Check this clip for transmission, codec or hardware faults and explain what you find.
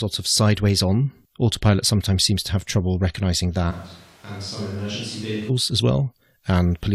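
One fault stands out: a switch to a distant microphone from 3.73 s to 5.48 s, starting right after "to have trouble recognizing". The speech abruptly turns roomy and hollow, thinner in the bass and about 10 dB quieter, with room noise rising to roughly 20 dB below the speech. The likely cause is that the close microphone's feed dropped out and a farther microphone carried the signal until the close one returned, equally abruptly.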